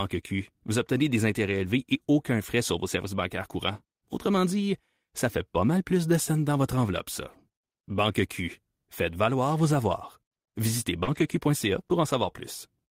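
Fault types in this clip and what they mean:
Short concealed packet loss: a brief smear around 11.03 s, where about 40 ms never arrived and the decoder stretched the preceding sound to fill it.
Lost packet rebuilt from error correction: from 11.07 to 11.37 s the sound turns rougher and noisier without gaps, because lost packets were replayed from low-bitrate backup copies.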